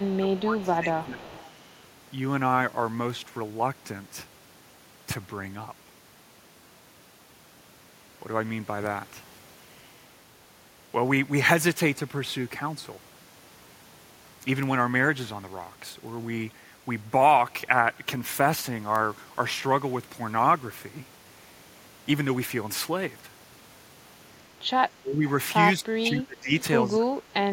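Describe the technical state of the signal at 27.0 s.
At 27.0 s the speech is suppressed in double talk from 26.88 to 27.35 s: the echo canceller likely mistook overlapping talk for echo, so the speech drops by about 25 dB.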